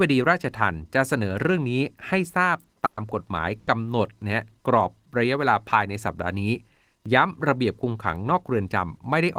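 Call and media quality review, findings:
Burst of packet loss at 2.85–2.99 s and 3.59–3.69 s: receiver concealment stretches the last sound over 120 ms and 80 ms gaps and fades it, then skips ahead.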